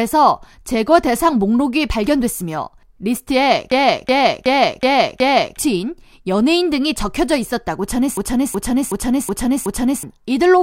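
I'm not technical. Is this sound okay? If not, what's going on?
No. Twice, at 3.72 to 5.57 s and 8.17 to 10.03 s, the computer briefly froze while the sound hardware kept replaying its last chunk. This is a system hang loop: one 0.37-second snippet of speech repeats five times in a stutter, and about two seconds of real audio is lost each time.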